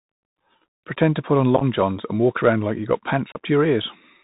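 Throughout the speech, the Bluetooth CVSD headset codec limits the sound, which fits a 64 kbit/s CVSD link. Each sample is a single up-or-down bit with an adaptive step, so nothing above 4 kHz survives. The result is plainly audible: a narrow, muffled band, a granular hiss under the speech, scratchy sibilants, and distortion wherever loud high-frequency content outruns the step size.

From 1.56 to 1.63 s, between "to put on" and "johns and walk around", unconcealed Bluetooth headset packet loss drops about 30 ms of audio, scattered over 45 ms in gaps no longer than 7.5 ms. Around seven packets go missing, and nothing fills their place. The speech breaks into a short burst of rough, chopped crackle with abrupt edges, then resumes briefly quieter as the CVSD step size rebuilds. From 3.32 to 3.40 s, just after "around like you've got", a second loss of about 30 ms, again around seven packets, leaves the same kind of abrupt hole and momentary level dip.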